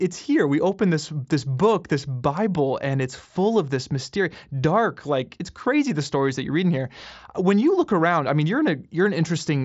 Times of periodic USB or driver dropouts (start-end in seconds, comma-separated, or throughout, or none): none